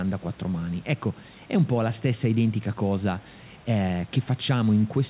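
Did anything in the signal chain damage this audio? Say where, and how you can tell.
No, nothing in the chain damaged this speech: the band stopping at 4 kHz fits a narrowband call codec such as G.711 A-law at 64 kbps working as designed, and the steady room noise sitting about 31 dB below the speech belongs to the recording space rather than to any stage of the system.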